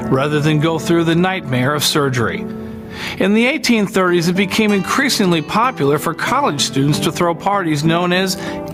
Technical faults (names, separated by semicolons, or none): gain pumping